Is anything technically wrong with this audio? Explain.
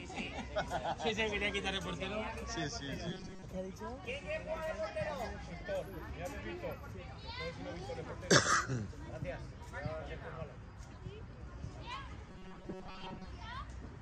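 Yes. At 3.11–3.42 s and 12.29–13.26 s there is robotic sound from repeated short buffers, a rigid metallic buzz at 188 Hz. Audio likely arrives too seldom, so a slice of about 5.3 ms is looped over most of each stretch. Unlike a dropout, nothing goes silent.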